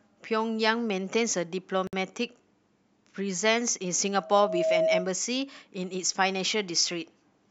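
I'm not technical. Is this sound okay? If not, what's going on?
No. At 1.87 s there is a gap at a join of encoded pieces: the audio drops out for about 57 milliseconds and then resumes. The recording was saved in separate chunks, apparently about 6 seconds each, and joined without trimming the bit of silence each chunk carries.

From 4.15 to 5.12 s there is a loudspeaker feedback squeal: a steady 644 Hz tone swells up over about half a second until it is louder than the speech. A microphone was picking up its own loudspeaker, and that tone kept amplifying itself.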